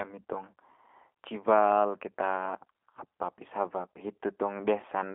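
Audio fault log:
Throughout, G.729 codec: the speech is squeezed into a telephone band of roughly 250 Hz to 3.4 kHz, with nothing above or below, and carries a plainly audible rough, synthetic edge, which fits an 8 kbit/s G.729A stream. The codec discards the waveform itself and resynthesises each 10 ms frame from a vocal tract filter, a pitch predictor and a few sparse pulses, so the fine texture of the voice is lost and a buzzy, slightly mechanical quality remains.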